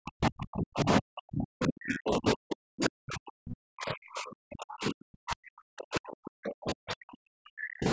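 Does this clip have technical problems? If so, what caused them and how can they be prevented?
Yes. From 0.0 to 7.87 s the speech keeps dipping, by up to about 40 dB. This is likely speech suppressed in double talk, where the echo canceller ducks the talker whenever the far end speaks. An echo canceller with reliable double-talk detection would prevent it.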